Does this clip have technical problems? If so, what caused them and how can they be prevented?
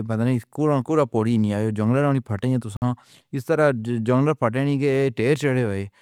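Yes. This speech clip has a gap between stream segments at 2.77 s, lasting until 2.82 s. The sound stops dead for about 52 ms and then resumes. The edges of the hole are hard. No audio is lost. The timestamps of two consecutive segments leave a short space between them. The player fills that space with silence. This fits segments of about 4 s. Prevent it by aligning each segment's timestamps exactly with the end of the previous one.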